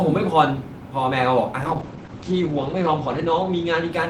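At 1.63 s a call bitrate drop sets in and runs to the end of the clip. The encoder's rate falls from 32 kbps to 10 kbps, sitting at its lowest for 1.38 s, and the audio band narrows from 20 kHz to 8 kHz. The speech turns muffled and rough, with a watery coarseness in the coding. Unlike a packet loss gap, nothing drops out; the audio keeps flowing but thinner and duller.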